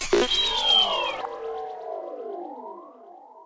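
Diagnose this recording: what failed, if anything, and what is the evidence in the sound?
At 1.21 s the sound jumps forward with no audible gap: about half a second of audio is simply missing, and the material on either side is butted straight together. This is a skip ahead at the network and jitter-buffer stage of the call path. A block of queued audio was discarded, probably by the buffer when it overflowed, to cut the delay by roughly half a second. Nothing was filled in, so the two sides were joined directly. The G.722 coding around it, with nothing above 8 kHz, is what that codec normally sounds like.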